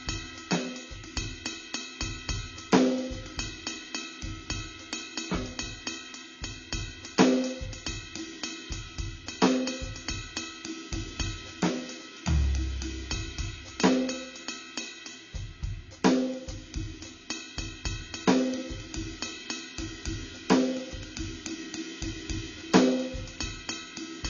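From start to finish, the music carries plainly audible codec damage, likely from AAC compression. Nothing sounds above 7.4 kHz, so the top end is gone and the sound is dull. The encoder codes the signal in blocks of frequency lines. It spends its few bits where hearing is most sensitive. The rest is cut off, left with holes or filled with substitute noise. Sustained sounds smear and take on a warbling or fizzy texture. This fits a low AAC-LC bitrate, around 24 kbps.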